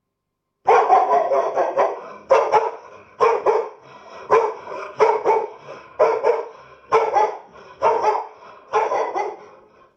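Single sharp clicks at 3.25 s and 4.41 s are likely dropped samples: about one sample missing each time, so the waveform jumps abruptly ahead.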